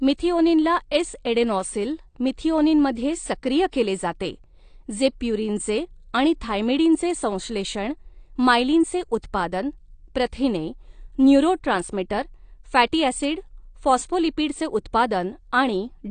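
Throughout the speech, the encoding has likely passed through AAC compression at a low bitrate, with the codec quantising its spectral lines so coarsely that it drops the top band entirely and starves what remains. Nothing is heard above 9 kHz, so the speech sounds dull and closed-in, and the damage is plainly audible: sibilants turn fizzy and smeared, and sustained sounds carry a warble. All of this fits a rate of around 32 kbps.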